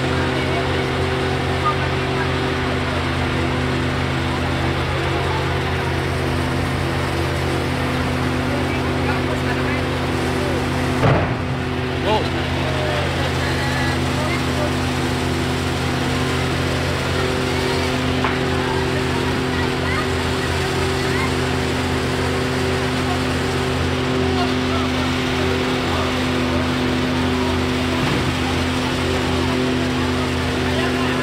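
Audio with chunks out of order at 19.32 to 19.4 s. One 40 ms chunk plays a chunk late, causing a brief jumbled moment with three hard joins.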